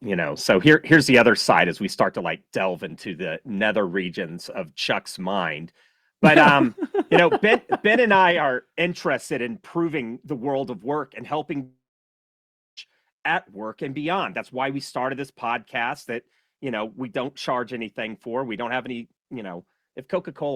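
Right at the start, the speech takes a couple of small level drops. At 1.02 s it falls by about 2 dB, and at 2.04 s, between "as we" and "to like delve into", by about 5 dB. Both sound like microphone volume stepped down, likely the call software's gain control turning the input down in a single notch. The voice and the background go quieter together, with no fade.

At 7.14 to 7.2 s there's a brief microphone overload. The peaks run about 2 dB past the converter's limit, so a small fraction of the samples get their tops sheared off. You hear it as a short, gritty crackle on the loudest part of that syllable. The cause is likely an input gain set too hot for the converter. Right after it comes another volume step at 7.29 s, down about 2 dB, which fits the software reacting to that clipped peak. A further step follows at 8.31 s, down about 4 dB, just before "are interested in proving".

The big one is a long network dropout from 11.63 to 12.79 s, between "of work and helping" and "at work and beyond". 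About 1.1 s of audio never arrived, likely from lost packets. The receiver stretches the last sound into a fading buzz, then leaves about a second of silence. The speech picks up again afterwards with that chunk simply missing.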